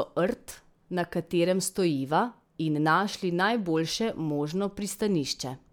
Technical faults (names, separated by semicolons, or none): none